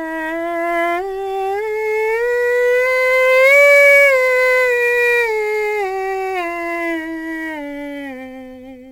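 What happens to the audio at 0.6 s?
Sample clock jitter is present at 0.6 s, as it is across the whole clip: the converter's timing wanders by a few microseconds, so each sample lands slightly off. Steep, bright passages in the music pick up a hiss-like roughness around 25 dB down.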